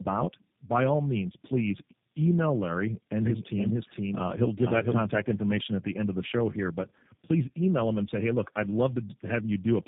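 Throughout, tandem speech coding: the speech sounds re-encoded by about three codecs in succession, each compounding earlier losses. It is rough and warbly, with nothing above 3.8 kHz.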